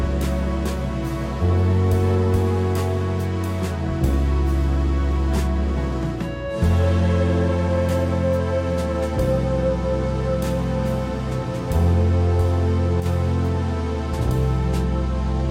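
Right near the end, from about 13.00 to 13.06 s, the audio briefly sags: for roughly 50 ms the level of everything drops by about 6 dB, then snaps straight back. That's a one channel drops out fault. The likely cause is one side of a stereo feed cutting out momentarily. Once the two sides are summed to mono, anything common to both loses half its contribution, giving that quick 6 dB dip, and anything carried only on the lost side vanishes for the duration.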